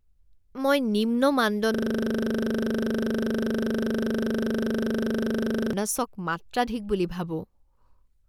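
At 1.74 s, just after "মই নিম্ন", the system froze while the audio hardware kept replaying the same 40 ms stretch of its ring buffer. This is a system hang loop. That single fragment repeats exactly, about a hundred times, until 5.73 s. With a loop this short, the repetition fuses into a steady buzz at 25 Hz rather than a stutter. The speech resumes with "মাত্ৰাধিক বুলি".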